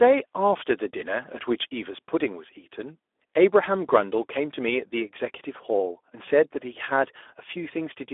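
Speex codec damage runs through the whole speech clip. The CELP coder has too few bits to model the excitation, so the voice sounds plainly noisy and hoarse. The band is confined to roughly 300 Hz to 3.5 kHz, and the thin, rough texture fits a bitrate of about 11 kbps.

VoIP packet loss concealed by the speech codec occurs from 6.25 to 6.28 s. The decoder replaced the missing audio, consistent with a single lost 20 ms frame, by extending its last pitch and filter at falling gain. The result is a brief fading smear before normal decoding resumes.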